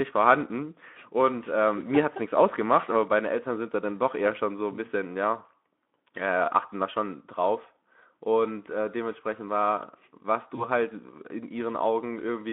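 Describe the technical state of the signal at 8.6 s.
At 8.6 s the speech is intact, with no fault present at that moment.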